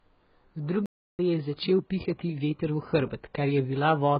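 AAC compression runs through the whole speech clip. The high frequencies are cut off, and the remaining band sounds dull, smeared and warbly. This is likely heavy AAC-LC coding, with the encoder cutting high frequencies and coarsely quantising what stays, which suggests a bitrate around 12 kbps.

A playback stall occurs from 0.86 to 1.19 s. The sound stops dead for about 331 ms and then resumes. The likely cause is that the player ran short of data or was briefly blocked, leaving the output silent until it caught up.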